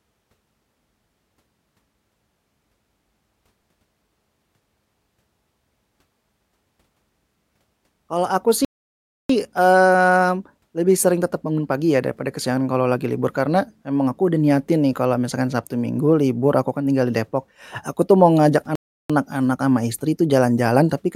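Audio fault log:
8.65 to 9.29 s, playback stall: the player likely starved of data, so the speech cuts to silence for about 0.65 s, resuming at "eee lebih sering tetep".
18.75 to 19.10 s, playback stall: output halts after "aku tuh mau ngajak", leaving about 0.34 s of dead silence before "sama istri itu" continues.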